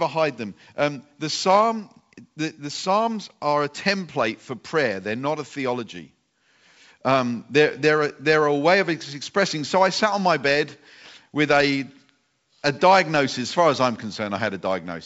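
The speech carries the full wideband bandwidth of G.722 telephone coding working normally, and no technical fault can be heard anywhere in the clip.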